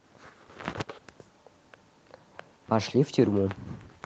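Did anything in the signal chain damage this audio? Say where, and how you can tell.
No, nothing in this speech recording stood out on listening as damage from any stage of the signal chain.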